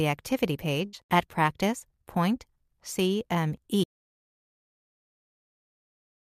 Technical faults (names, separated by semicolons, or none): burst of packet loss; audio dropout to silence